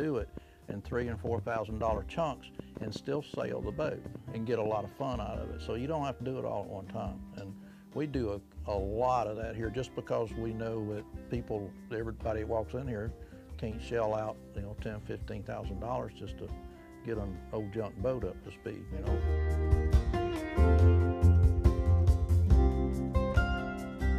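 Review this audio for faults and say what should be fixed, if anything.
A train of clicks runs from 0.02 to 4.67 s: about twenty near-identical pulses, roughly 4.5 per second but unevenly spaced, peaking about 5 dB above the sound and audible in quiet moments too. Because they are separate, similar-shaped ticks at an uneven rate, this is not random crackle or gaps from dropouts; the likely cause is interference or a faulty connection or power supply. Shield or relocate the gear and check the interface connection.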